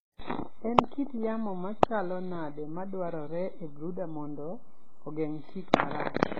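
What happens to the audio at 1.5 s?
At 1.5 s, as across the whole clip, the speech was likely transcoded between lossy codecs, a low-rate AAC-LC encode re-encoded as HE-AAC, which fits roughly 16 then 20 kbit/s. Both codecs' smearing and swirly artefacts stack together, with nothing above 14.4 kHz.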